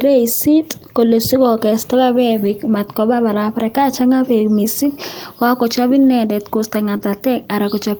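Speech, with brief packet-loss damage in three places. At 2.45 to 2.51 s, just before "matkobaa barabara", there is a lost packet rebuilt from error correction. About 40 ms sounds rougher and noisier, which fits two lost packets. The decoder played the low-bitrate copies carried in the following packets, so nothing drops out. The sound just coarsens for that moment. The same thing happens at 6.07 s, right after "beek mising kakochop", this time over about 20 ms, which fits a single packet. At 6.97 to 7.01 s there is a short concealed packet loss. About 20 ms never arrived, and the receiver filled roughly 18 ms by extending the preceding sound before blending back in. It is heard as a quick smear or wobble. Immediately after, at 7.01 to 7.03 s, another packet was rebuilt from error correction, so the roughness continues for about 20 ms more.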